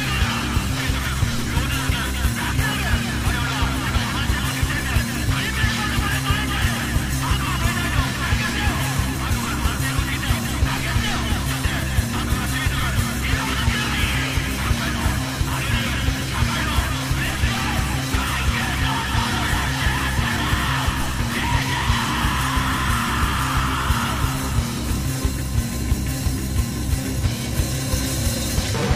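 No technical faults can be heard anywhere in this clip.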